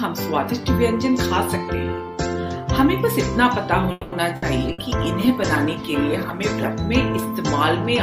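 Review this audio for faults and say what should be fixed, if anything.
A call audio freeze runs from 3.91 to 4.15 s. The sound stalls and the receiver fills about 210 ms with a fading continuation, then resumes with nothing lost, about 210 ms late. The likely cause is delayed packets draining the jitter buffer. On a spectrogram, smeared, decaying bands replace normal detail. A deeper jitter buffer or a steadier network path would prevent it.

A burst of packet loss occurs at 4.36–4.45 s and again at 4.72–4.81 s. Each drops 60 ms of sound, which is replaced by a fading continuation of the last sound before the audio jumps ahead. The waveform shows a decaying, repetitive stretch, then an abrupt resumption. Forward error correction or redundancy would prevent it.

A call bitrate drop from 96 to 22 kbps runs from 4.64 to 6.83 s, holding at the lowest rate for about 2.1 s. The encoder codes coarsely there, so the sound turns rough and muffled. 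A spectrogram shows the high frequencies cut off and blotchy texture. Better bandwidth estimation and congestion control would prevent it.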